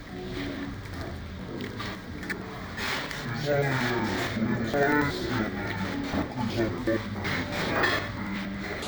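Throughout, the sounds come out an octave low, doubled and choppy every 92.88 ms. This is interleaved audio read as planar, with each block's halves played at half speed.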